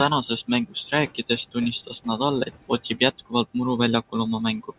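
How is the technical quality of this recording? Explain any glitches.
The recording has one processing fault that runs through the whole clip, heard against band-limited call audio with nothing above about 4 kHz, which fits a narrowband telephone codec.

Noise suppressor artifacts, throughout: the background drops away between phrases and swells back under speech. The suppressor is cutting the steady room noise by about 18 dB, frame by frame.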